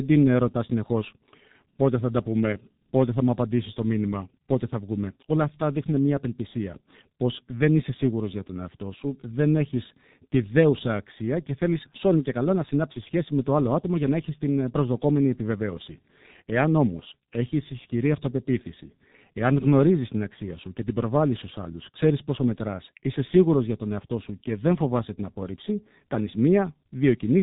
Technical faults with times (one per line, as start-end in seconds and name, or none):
0.00-27.42 G.723.1 codec